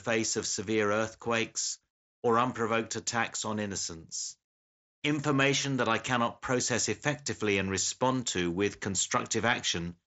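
Nothing goes wrong anywhere in this speech, which simply comes through the usual Bluetooth mSBC headset link with its top end stopping around 7.7 kHz.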